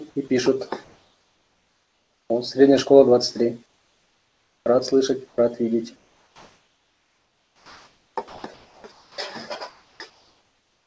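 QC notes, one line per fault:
0.28 s, sound dropped by the voice detector: a 20 ms slice of the sound gives way to steady noise, taking about 10 ms of real content with it, then the sound resumes. The likely cause is the sender's detector briefly judging the sound as background and pausing transmission, with the receiver filling the gap. Unlike onset clipping, the loss falls inside ongoing sound rather than at its start, and unlike chopping it happens only once.
0.84–2.30 s, 3.66–4.66 s, 5.28–5.38 s and 9.70–10.86 s, comfort noise in place of the background: in each pause the textured background becomes a smooth, featureless hiss. Its level matches the real background in the first run, drops about 2 dB in the second and about 3 dB in the third, and the background sits roughly 40 to 48 dB below the loudest sound. This is likely discontinuous transmission, with synthetic noise standing in for the real background. 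No wanted sound is lost, which separates it from a dropout.
5.96–9.18 s, sound chopped by the voice detector: across this stretch the transmission switches on and off repeatedly, and about 2.9 s in total is replaced by comfort noise. The sound turns choppy. The likely cause is the detector repeatedly toggling its decision on low-level material. It differs from a single dropout because the gaps recur throughout the stretch, within the G.722 path's 8 kHz bandwidth.
9.98 s, onset clipped by the voice detector: the sound begins abruptly, because its first 20 ms never arrived and comfort noise covers that instant. The likely cause is the detector reacting late to sound starting up again after the preceding pause, so the soft attack was never sent. What sets it apart from a mid-sound dropout is that only the beginning is missing.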